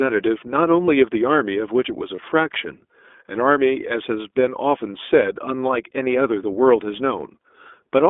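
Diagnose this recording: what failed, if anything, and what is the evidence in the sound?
iLBC codec, throughout the speech: this is a codec-stage fault. The audio is confined to a telephone band of roughly 250 Hz to 3.5 kHz, with nothing above it, and every syllable carries a clearly audible rough, slightly synthetic grain. iLBC models each short block of speech independently, which fits its 15.2 kbps mode with 20 ms frames. The coarse excitation coding is what gives the voice that buzzy texture.

Lost iLBC frames, from 2.16 to 2.21 s: this is a network-stage fault, with packet loss on the way to the decoder. For about 20 ms the speech turns into a brief held, faintly buzzy vowel-like sound rather than going silent. The decoder fills the gap by repeating the last pitch period blended with noise. Because each iLBC frame stands alone, the speech is clean again immediately afterwards.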